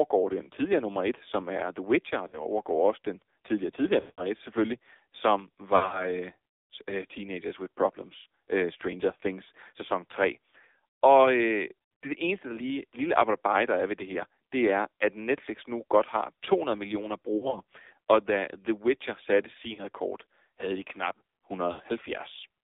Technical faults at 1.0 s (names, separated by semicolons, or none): AMR narrowband mobile codec